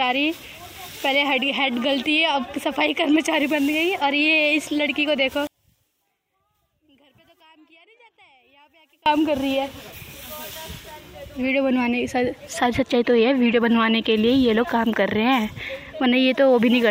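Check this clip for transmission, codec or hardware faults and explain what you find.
One fault is present. From 5.47 to 9.06 s, one channel is likely inverted: reversed polarity makes shared content cancel in mono, so the sound drops about 36 dB to a faint residue.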